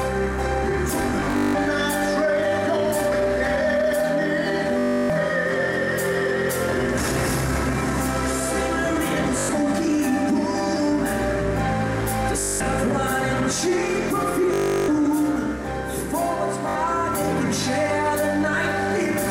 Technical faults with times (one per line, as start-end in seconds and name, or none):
1.02-1.55 Bluetooth stutter
4.79-5.10 Bluetooth stutter
9.39-9.49 Bluetooth stutter
12.40-12.61 Bluetooth stutter
14.54-14.88 Bluetooth stutter
16.69-16.75 Bluetooth stutter